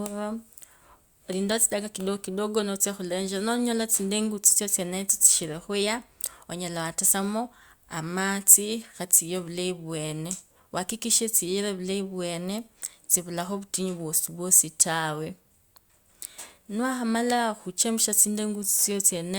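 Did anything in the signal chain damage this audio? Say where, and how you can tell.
No, nothing in the signal chain damaged this audio.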